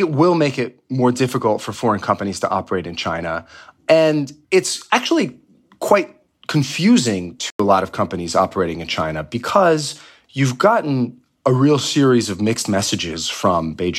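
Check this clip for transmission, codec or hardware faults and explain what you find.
One fault is present in this speech recording: a corrupt frame muted dropout.

From 7.41 s to 7.60 s the speech cuts to silence for about 0.19 s, a gap length that points to two consecutive compressed frames being lost. Damaged bits made the decoder reject those frames, and the player filled their slot with silence rather than skipping it, so timing afterward stays intact. It sounds like an abrupt hole in the speech. On a waveform it is a flat, near-silent block with square edges, and a spectrogram shows a clean vertical blank band across all frequencies.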